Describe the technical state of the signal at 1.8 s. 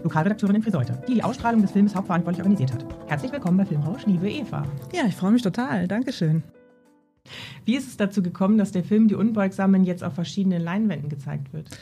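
At 1.8 s you're in the middle of a time-stretched section that runs from the start of the clip to about 4.06 s. The sound moves about 1.68 times faster than normal but keeps its pitch, so it comes across as rushed, then the pace drops back abruptly. That's likely software squeezing the passage to fit a shorter length, dropping tiny slices of audio rather than simply playing it faster.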